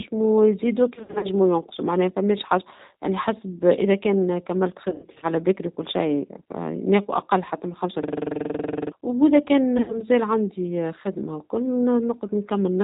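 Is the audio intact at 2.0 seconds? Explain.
No, G.729 coding runs through the whole clip, including 2.0 seconds: speech is resynthesised from a vocal-tract filter and sparse pulses, nothing above 4 kHz survives, and it sounds rough and synthetic, consistent with roughly 8 kbit/s.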